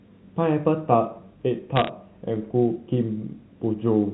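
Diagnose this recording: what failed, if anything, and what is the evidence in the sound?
Between 1.76 and 1.89 s a burst of sharp ticks and crackle lands on top of the speech. This is bit errors on a digital phone line, at the transmission stage of what sounds like an A-law G.711 link, with an error rate of around half a percent. Each flipped bit corrupts a single companded sample, so a hit on the sign or a high-order bit throws out an isolated spike. The speech between ticks is intact, which rules out packet loss or clipping.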